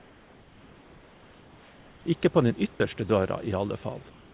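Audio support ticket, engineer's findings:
Comfort noise in place of the background, 0.00 to 2.06 s and 4.10 to 4.34 s: room noise swapped for steady, featureless hiss about 2 dB quieter. Likely DTX at sender, receiver synthesising noise. Unlike a gate, no dead silence. Band-limited to 4 kHz throughout, fitting narrowband G.711.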